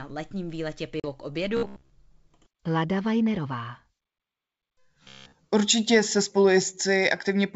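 A short speech recording carried over a wideband G.722 call at 64 kbit/s, with the codec itself adding at most a faint upper-band hiss. Right after "letním výletě", from 1.00 to 1.06 s, there is packet loss on the ADPCM call: about 40 ms, roughly two packets' worth, drops out to silence with hard edges. Because ADPCM codes differences against an adaptive predictor and step size, the decoder's state no longer matches the sender's when audio resumes, so the speech re-enters slightly distorted before the adaptation settles. Two stretches of robotic sound from repeated short buffers follow, at 1.57 to 1.93 s and 5.04 to 5.34 s. Both carry a rigid, metallic buzz at 66.7 Hz, which fits a 15 ms block being played over and over, likely because new audio arrived too late and the receiver looped its last buffer instead. Roughly 70% of the first stretch and all of the second is repeated material, so the second sounds fully mechanical while still loosely tracking the speech contour.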